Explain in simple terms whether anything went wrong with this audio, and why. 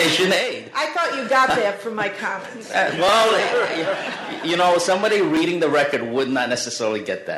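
Three small glitches can be heard, at 1.50 s, 3.09 s and 5.37 s. Each is a short spot where the sound jumps forward slightly, with no gap of silence. This is most likely a dropped buffer (overrun): the recording software fell behind, the hardware overwrote a chunk of audio before it was collected, and the two remaining edges were joined directly. Only a few milliseconds are missing each time, roughly 7 ms at the first glitch and about 3 ms at the others.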